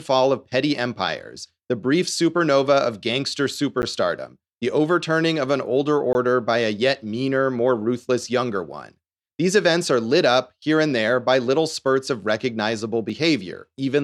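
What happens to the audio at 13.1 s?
At 13.09 s, just after "little spurts of recognizable", a block of digital silence drops into the speech. The output buffer most likely went unfilled for about 1 ms and was left at zero, so the signal is chopped off abruptly and restored with no fade. With a hole this brief, it is heard as a tick or dip rather than an audible gap, sitting right on the tail of that phrase.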